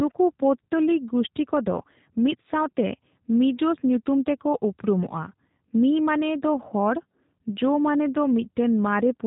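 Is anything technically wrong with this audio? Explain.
Yes. Throughout, the speech carries G.729 codec damage: a filter-and-pulse model rebuilds it at what sounds like 8 kbit/s, leaving it rough and synthetic. A spectrogram shows nothing above 4 kHz.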